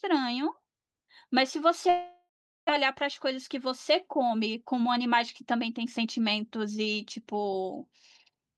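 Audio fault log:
1.89–2.71 s, long network dropout: the sound breaks off and the gap is bridged for about 0.8 s. First the last sound carries on as a fading buzz, then comes about 0.41 s of near-silence, and the speech resumes with roughly 0.6 s of it simply gone. The likely cause is a run of packets that never arrived, with the receiver's concealment filling in until it gave up. On a waveform the envelope tapers into a flat gap, and a spectrogram shows smeared harmonics dissolving into a blank band before a hard restart.
2.83–6.21 s, jitter buffer speed-up: for about 3.4 s the speech runs at about 105% of normal rate while keeping its pitch, so it sounds slightly hurried. After the interruption the buffer was holding extra audio, roughly 0.2 s too much, and the receiver worked that backlog off by cutting out many tiny slices of one or a few pitch periods. The spectrogram keeps harmonic spacing unchanged while syllables compress in time, and the waveform shows periodic cycles dropped at seamless joins.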